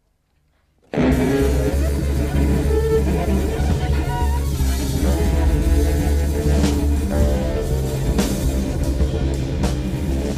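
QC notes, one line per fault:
0.74–1.72 s, drift correction step: playback abruptly slows by 5.6% and drops nearly a semitone, about 100 cents, then snaps back, likely a clock-matching rate jump rebalancing a buffer. Speed and pitch shift together in one step, unlike wow's gradual, cyclic waver.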